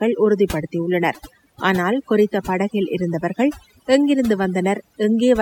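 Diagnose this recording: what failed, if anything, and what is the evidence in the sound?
Overdone noise removal failed at the call processing stage, across the whole speech clip. The background drops and breaks up into twinkling specks. The suppressor cut bands near its noise estimate too deeply, taking quiet speech detail with them.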